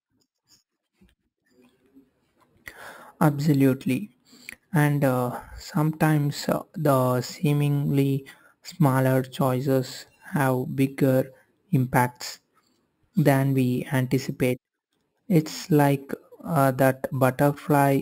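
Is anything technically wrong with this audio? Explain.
Yes. Throughout the speech there is imaging from sample-and-hold upsampling. Samples were repeated without smoothing, which fits a 12 kHz source raised to 44.1 kHz. Mirrored spectrum fills 6 to 12 kHz at about 22 dB below the speech, heard as a metallic fizz that tracks the speech level.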